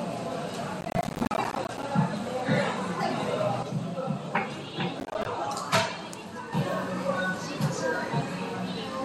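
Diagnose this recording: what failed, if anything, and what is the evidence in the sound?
Processor overload crackle at 0.81 to 1.83 s and again at 5.0 to 5.26 s, at the driver or buffer stage: missed deadlines drop roughly 10 ms buffers to silence, giving gritty crackle.

Sudden gain jump from 3.63 to 6.53 s, in digital processing: sound and background noise both step down about 6 dB and back, likely an unramped digital gain change.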